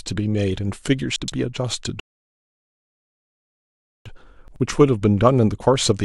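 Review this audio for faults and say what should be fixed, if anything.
Chunks out of order at 1.16 to 1.32 s and again at 4.48 to 4.60 s. In both places a 40 ms piece of the speech turns up late: three chunks behind at the first spot, two at the second. It plays after material that should have followed it, so the sound jumbles briefly, with three hard joins. Nothing is missing, only misplaced. Reorder incoming chunks by sequence number or timestamp before they reach the output.

Rebuffering stall from 2.00 to 4.06 s. Playback runs dry, drops to silence for about 2.06 s, then resumes exactly where it stopped. No speech is lost, but that gap is added to the running time and breaks the flow. Keep a larger playback buffer, or adapt the stream's bitrate to the available bandwidth, so downloading stays ahead of playback.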